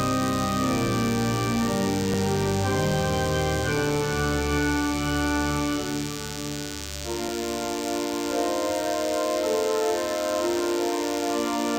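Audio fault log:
throughout DECT cordless phone buzz: A nearby DECT handset or base transmits a radio burst every 10 ms, and the audio circuitry rectifies it into the signal. The result is a steady, thin buzz at 100 Hz, rich in harmonics, sitting only roughly 10 dB below the sound.
7.29 s repeated buffer: Fresh audio arrived late, so the device replayed its last block once more. That block lasts 5.8 ms, which fits a 256-sample buffer, so the hard joins at each end of the repeat are heard as a click or brief buzz rather than a stutter, with essentially nothing missing.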